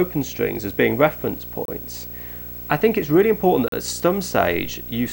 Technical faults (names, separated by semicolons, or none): video or display buzz; gap between stream segments